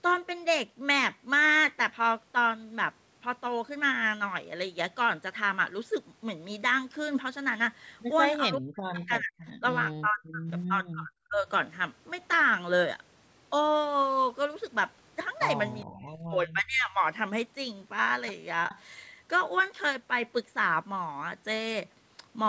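Between 8.44 and 11.47 s the speech drops out in pieces at 8.44–9.34, 9.59–9.64, 9.9–10.48, 10.68–11.11 and 11.28–11.47 s, and again at 15.85–17.03 s, by up to about 40 dB. This is speech suppressed in double talk, likely an echo canceller ducking the talker while the far side spoke, visible as gaps in the waveform envelope and faded spectrogram bands. At 18.7–18.8 s a brief echo leak returns a faint copy about 412 ms late, about 20 dB down, seen as a weak repeated smear on the spectrogram.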